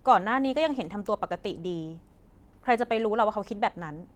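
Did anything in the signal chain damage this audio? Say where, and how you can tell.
No, nothing in the chain damaged this speech. The Opus voice compression is working as intended, keeping the full band with content reaching about 20.2 kHz and leaving only light coding traces, which fits hybrid mode at roughly 20 kbps.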